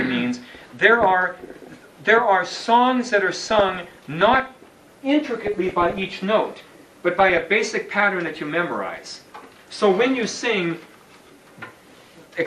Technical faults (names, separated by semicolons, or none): MP2 compression; DAB burbling